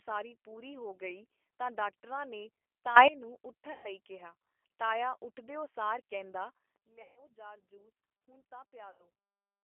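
Speech, heard through a G.729 codec for the whole clip. The sound is confined to a narrow telephone band of roughly 300 Hz to 3.4 kHz. Nothing above that survives. The codec rebuilds each short frame from a filter model and a few pulses, so the voice is plainly rough and slightly synthetic. That character fits an 8 kbit/s G.729A stream.

Two sudden gain jumps change the level in a single step. The first runs from 2.96 to 3.08 s, just after "ਗਈ ਤਾਂ ਡਾਕਟਰਾਂ ਨੇ". The sound and its background leap up by about 17 dB, then drop back. The second starts at 6.76 s and lasts to the end. There the level falls by about 17 dB. Neither change is ramped. The likely cause is a digital gain setting applied instantly.

VoIP packet loss concealed by the speech codec occurs three times. The first is at 3.72 to 3.87 s, just before "ਕਿਹਾ ਤਾਇਆ ਉੱਠ ਦਿਓ", with 120 ms missing. The second is at 7.02 to 7.21 s, right after "ਉੱਠ ਦਿਓ ਸਾਰ ਕਹਿੰਦਾ", with 140 ms missing. 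The third is at 8.91 to 9.06 s, with 80 ms missing. The first gap fits six lost 20 ms packets. In each gap the decoder repeats its last pitch and filter. The voice smears into a fading buzz. It stays weak briefly after the audio resumes.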